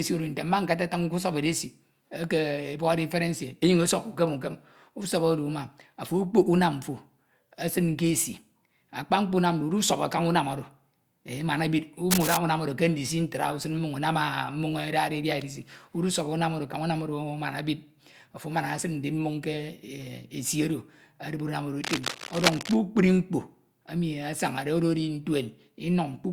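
At 12.11 to 12.37 s, and again from 21.83 to 22.76 s, cable scratch noise breaks over the speech: dense, ragged rustling, roughly as loud as the voice the first time and somewhat quieter the second. The likely cause is a worn cable or connector being moved, its contact resistance flickering. A spectrogram shows broadband, uneven vertical smears across those spans, and the waveform shows clustered irregular spikes riding on the speech.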